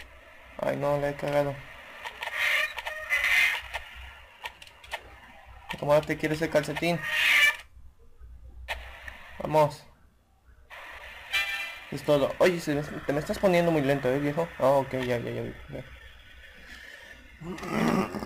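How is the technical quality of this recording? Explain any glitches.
The recording has sample clock jitter running through its whole length. The converter's clock wanders by something like 10 microseconds rms, so each sample is captured a little early or late at random. Because the resulting error scales with how steeply the waveform is changing, it appears as a hiss or roughness riding on the audio, about 20 dB below the signal, rising with loud and high-frequency material and disappearing in silent passages.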